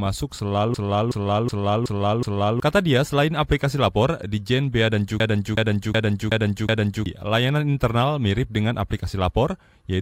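From 0.74 to 2.60 s, then again from 5.20 to 7.06 s just before "layanan internal mirip dengan", there's a system hang loop: the driver froze and the hardware replayed one 0.37 s chunk five times, a 2.7 Hz skipping-record repeat that fits a 16384-sample buffer, swallowing about two seconds each time.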